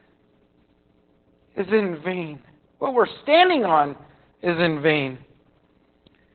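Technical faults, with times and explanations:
Throughout, Opus voice compression: the speech is confined to a narrowband range below about 4 kHz and sounds heavily muffled, hoarse and faintly robotic, as the SILK linear-prediction coder quantises the excitation coarsely, which fits a bitrate of about 8 kbps.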